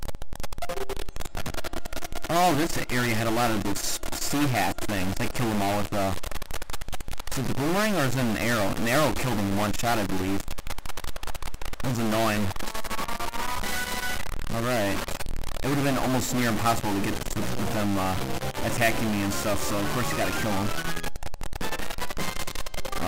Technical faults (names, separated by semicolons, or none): stuck bit